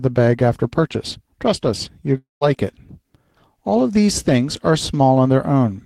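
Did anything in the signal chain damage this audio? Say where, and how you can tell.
Yes. The network stage likely dropped packets for about a quarter second, from 2.17 to 2.44 s. The receiver stretched the last speech into a fading buzz, left about 160 ms of near-silence, then resumed with roughly 240 ms of speech missing: a long network dropout.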